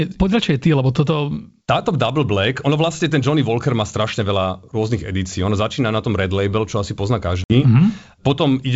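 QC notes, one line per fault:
7.44–7.54 s, packet loss on an ADPCM call: just after "čo asi pozná" the wideband G.722 sound breaks off into a hard-edged silent hole of about 60 ms, which points to several consecutive packets going missing. The decoder's adaptive predictor and step size lose track of the sender's, so the sound comes back slightly distorted before settling within tens of milliseconds. That mistracked recovery distinguishes it from a simple dropout.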